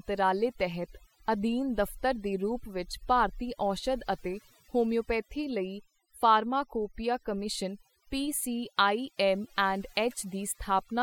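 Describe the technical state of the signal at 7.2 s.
At 7.2 s, overdone noise removal, present throughout, gates bands near the noise floor: speech over twinkling near-silence, with scattered isolated specks in an emptied spectrogram.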